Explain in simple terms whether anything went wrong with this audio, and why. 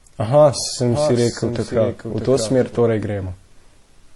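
The speech sounds dull all the way through, with two different kinds of swirly, watery roughness layered together. That is likely transcoding between lossy codecs: the audio was squeezed by one compression format and then squeezed again by another, so both sets of damage remain.

From 0.92 to 2.78 s, a quieter second copy of the same speech runs about seven tenths of a second behind, like a flat, dry echo that switches on and off suddenly. This is a doubled audio track, likely from the sound being captured twice through a slower second path.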